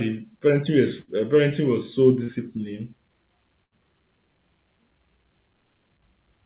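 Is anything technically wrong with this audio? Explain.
Yes. At 1.0 to 1.1 s and again at 3.64 to 3.74 s, the speech freezes into a held buzz or hiss that fades before talk resumes with a small piece skipped. This is a burst of packet loss: about 80 ms never arrived, and the receiver stretched the last sound across the gap for roughly 75 ms.

Between 2.24 and 2.31 s there is a brief smear or wobble. This is short concealed packet loss: about 40 ms went missing, and the decoder continued the preceding sound before blending back, all within a narrowband call path with nothing above 4 kHz, consistent with a G.711-style codec.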